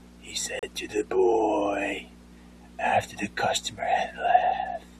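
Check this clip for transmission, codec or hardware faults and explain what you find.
One transmission fault is present: a gap between stream segments at 0.59 to 0.63 s. Two adjacent segments of the speech stream carry timestamps that do not quite meet, so the player inserts silence to bridge the missing 35.5 ms. The result is a short, hard-edged hole in the speech: the sound stops abruptly and resumes just as abruptly. No audio is lost; the speech after the hole is simply pushed later by that amount.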